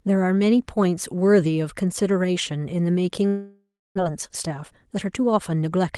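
From 3.27 to 4.00 s the stream most likely suffered a long network dropout: packets stopped arriving, and the receiver stretched the last speech into a fading buzz before about 0.29 s of silence, with roughly 0.4 s of speech never played.

From 4.07 to 5.84 s a jitter buffer speed-up follows. With the buffer now holding around 0.3 s too much, the receiver trims tiny pitch-period slices again and again, so speech runs about 16% fast at unchanged pitch and sounds hurried.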